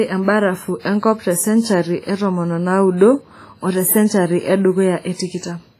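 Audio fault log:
Throughout: WMA compression, likely the cause of the heavy damage heard across the whole speech clip. The sound rings and smears, with a washy hiss that swells and fades along with the signal, because the transform coder spreads its quantisation noise over tens of milliseconds around each block. Quieter spectral detail drops out entirely, and nothing remains above 15.2 kHz. That combination points to a low bitrate, around 24 kbps.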